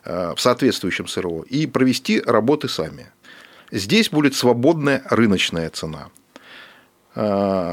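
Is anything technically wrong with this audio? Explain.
No, the speech signal shows no technical faults anywhere in the recording.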